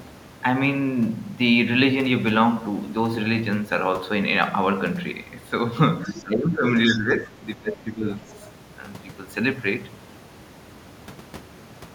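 A faint second voice, about 20 dB under the speech, slips in at 6.03 to 6.22 s, and the speech then dips by up to about 20 dB from 6.06 to 6.64 s. Further dips of about 10 dB at 6.86 to 7.37 s and about 15 dB at 7.56 to 8.28 s sound like speech suppressed in double talk, likely from an echo canceller ducking the talker while the far end was speaking. Brief scraps of the other side's voice leaking through return at 6.91 to 6.97 s (about 15 dB down) and 8.3 to 8.4 s (about 30 dB down), likely loudspeaker echo the canceller left behind.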